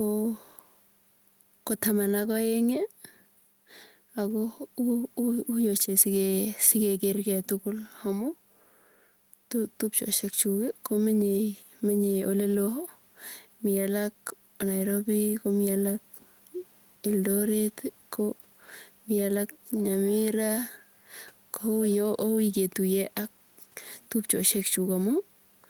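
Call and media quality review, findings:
Gain pumping throughout the speech, a gain swing of around 5 dB. Likely input gain set too high, with a fast limiter or compressor clamping peaks. Room noise about 42 dB below speech.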